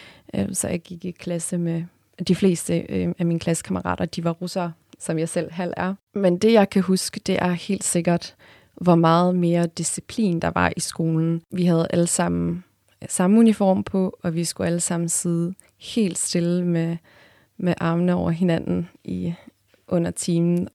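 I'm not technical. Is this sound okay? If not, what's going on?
Yes, nothing stood out as a problem when listening to this recording.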